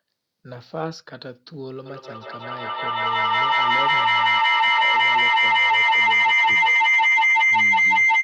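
From 1.86 s to the end, a feedback howl takes over the speech. A microphone and loudspeaker loop adds gain on each pass, so repeats grow rather than decay, narrowing to a tone around 2 kHz, with repeats roughly every fifth of a second, and peaking about 17 dB above the speech.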